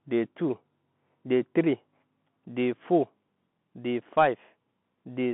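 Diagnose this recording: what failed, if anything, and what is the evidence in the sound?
The speech passed through a Bluetooth CVSD headset codec for its whole length, a codec-stage failure in which the call was carried on the narrowband headset link. The line band runs from about 150 Hz to 3.5 kHz, so everything above that is gone. The codec damage is plainly audible: a granular hiss sits under the speech, sibilants turn scratchy, and fast loud passages smear where the one-bit up/down steps cannot keep pace, which fits a 64 kbps CVSD stream.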